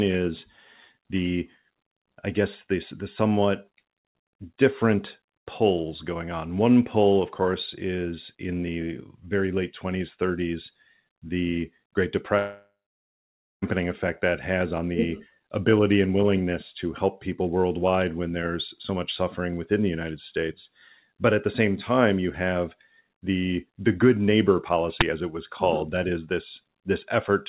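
A long network dropout runs from 12.38 to 13.64 s in this speech recording, which comes through a G.711 mu-law call path with nothing above 4 kHz. The receiver stretches the last sound into a fading buzz, then leaves about 0.9 s of silence. When speech resumes at "effect that has on", roughly 1.24 s of audio is simply gone, most likely because packets stopped arriving over the network for that stretch. An uninitialised buffer fault hits at 25.01 s, between "the the good neighbor" and "as it was". It is a loud, harsh burst of digital noise about 12 ms long, which fits a 512-sample block being played before any audio was written into it, so leftover memory came out as samples.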